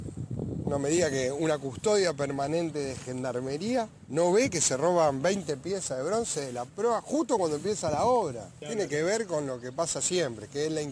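Nothing here catches the ear as a technical fault; the audio just runs along steadily with no glitches, dropouts or odd jumps anywhere.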